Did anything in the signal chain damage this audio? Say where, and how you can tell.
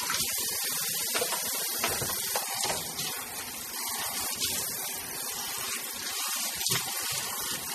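Yes, the damage sits at the codec stage and runs through the whole clip. There's nothing at all above 14.5 kHz, a hard ceiling rather than a gentle roll-off, and the codec damage is plainly audible as a watery, swirling texture. That's likely MP3 compression, with the sound pointing to a starved bitrate around 32 kbps. The encoder chopped the treble to save bits and kept dropping weak frequency lines in and out between frames, which produces that churning shimmer.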